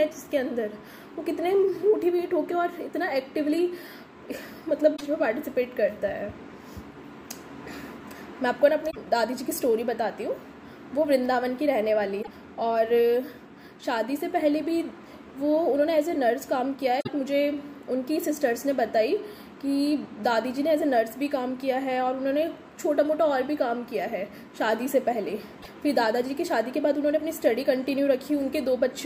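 Damaged data in a compressed stream hits at 4.93, 8.87, 12.19, 16.99 and 25.59 s. Each time, the decoder misreads corrupted frames and resyncs, leaving a roughly 0.1 s glitch that shows as a broadband smear and a jagged waveform break.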